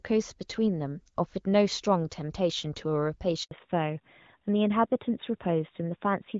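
At 3.43 s the speech cuts out in a handover gap. The call appears to switch from one network to another, and no speech frames arrive during the move. The sound fades within a few tens of milliseconds and stays silent for 80 ms, until 3.51 s. Whatever was said in that span is simply gone. The break is short, like a tiny hole punched in the line.

From 3.51 s to the end, the call shows a fallback to narrowband. Before the gap, the speech carries the light coding texture of the AMR wideband (HD Voice) codec, which fits a rate around 12.65 kbit/s. After it, nothing above 4 kHz remains. That points to a switch to the older AMR-NB codec near 12.2 kbit/s. Sibilants lose their sparkle. The speech sounds duller, boxier and rougher, like an old phone line.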